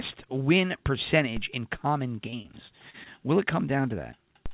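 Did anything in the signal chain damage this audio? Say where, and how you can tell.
Yes. At the converter or analogue input stage there is a DC step: the waveform's zero line jumps at 1.37 s, just before "in common", and again at 4.46 s. Each jump is heard as a brief low thump while the speech carries on. On the waveform the baseline jumps up or down and then creeps back, a decay that matches a 5 Hz high-pass bleeding off the offset. A spectrogram shows a thin full-height click with energy pooled at the very bottom.

Between 2.30 and 3.08 s, right after "in common", the network caused repeated packet loss (robotic sound). Five short gaps, the longest 34 ms, were bridged by stretching the last good audio. That concealment covers about 15 percent of the stretch and gives the choppy quality. On a spectrogram the harmonics freeze into flat, smeared bands at each patch. The waveform shows repeated, too-regular cycles there. 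The call path's G.711 mu-law codec is visible as a hard ceiling at 4 kHz.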